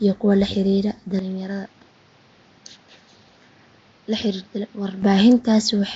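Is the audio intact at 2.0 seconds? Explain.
No. At 2.0 s the sound carries a rough, hissy halo and a smeared, underwater quality with nothing above 7.7 kHz, most likely Nellymoser compression. That codec spends a fixed, small bit budget on short blocks, leaving weak bands empty and filling them with noise.

The moment also falls within an input switched to a poorer device, from 1.19 to 5.03 s, starting right after "iyo kuwa la xiriira". With no gap, the sound turns duller and boxier, the band narrows to 6.7 kHz, the level drops by roughly 10 dB, and a new noise floor appears about 30 dB below the signal. This fits a likely change to a narrower-band microphone or headset profile.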